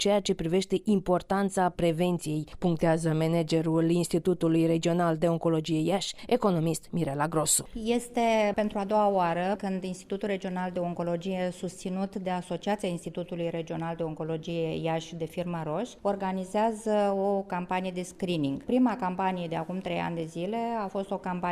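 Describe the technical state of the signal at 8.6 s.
At 8.6 s the signal is intact, with no dropout, distortion or other fault audible at that point.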